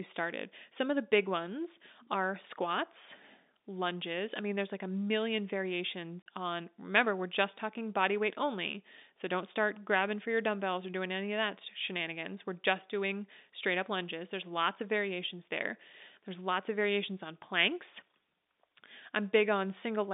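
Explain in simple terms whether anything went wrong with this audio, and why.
At 6.22 s the speech drops out for about 40 ms. That is packet loss filled with silence. Pieces of the stream never arrived, and the receiver played nothing instead. The gap fits two lost packets. Its edges are hard.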